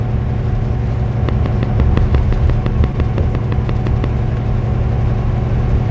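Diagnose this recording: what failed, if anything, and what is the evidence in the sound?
Analogue wiring or interface: a regular train of clicks, about 5.8 per second from 1.29 to 4.05 s, roughly fifteen similar pops well above the sound, likely from nearby equipment's interference.

Network stage: short concealed packet loss at 2.92 to 2.95 s. About 20 ms went missing and 13 ms was filled by extrapolation, giving one brief smear rather than a repeating tick.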